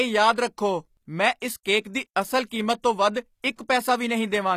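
Throughout the speech, plainly audible HE-AAC compression is likely the cause of a treble that sounds gritty and metallic, with s sounds turned lispy and nothing at all above 14.9 kHz. The treble has been rebuilt from copied lower bands rather than coded, consistent with a bitrate around 24 kbps. Unlike a simple low-pass or band-limited recording, the highs are present but do not match the harmonics below them.

Pre-echo appears at 1.40 s, between "ਰੱਖੋ ਮੈਂ" and "ਇਸ ਕੇਕ", as an 18 ms smear of hiss just before the attack. It returns from 1.63 to 1.65 s, after "ਰੱਖੋ ਮੈਂ ਇਸ", spreading 29 ms, and again at 3.42 s for 17 ms. In each case, noise sized for the loud onset has spilled into the quiet moment before it within the same transform block, softening the attack. Unlike reverb or a click, this noise comes before the sound rather than after it.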